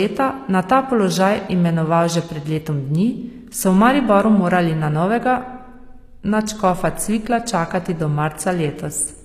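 Across the whole clip the speech carries plainly audible HE-AAC compression damage, most likely from a low bitrate around 24 kbps. The treble is rebuilt by copying lower bands upward, so s sounds come out gritty and metallic, and nothing survives above about 14.9 kHz.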